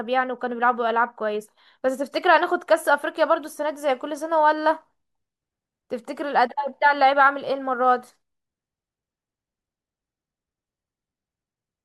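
No technical faults can be heard in this speech recording. Nothing in it stands out as a problem at any point.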